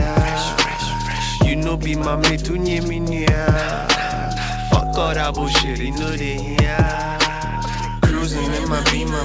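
Nothing stood out on listening; the sound carries the limited top end of a call codec, with nothing above 8 kHz, which fits a 64 kbps G.722 link.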